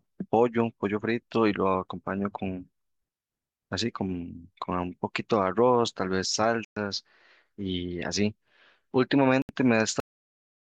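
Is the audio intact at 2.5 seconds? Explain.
Yes, at 2.5 seconds the speech plays through cleanly, with no dropout, click, distortion or other fault to be heard at that point.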